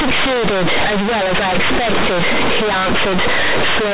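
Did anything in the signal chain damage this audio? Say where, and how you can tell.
Yes: companded audio read as linear, at the sample-format conversion stage, throughout. Mu-law bytes are played as plain 8-bit samples, so every sign change swings across half the range: loud, buzzy distortion and heavy noise in pauses. Plain clipping, by contrast, would leave pauses quiet.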